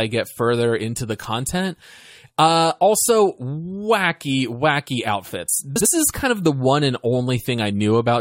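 At 5.76 s, just after "also wacky wacky outfits", a brief frames-out-of-order fault runs to 5.86 s, ending before "is kind of the". Two adjacent blocks of about 46 ms each were decoded in swapped order, which fits runs of two frames apiece. The speech in that tenth of a second plays with its two halves exchanged, giving a garbled flutter. No time is lost.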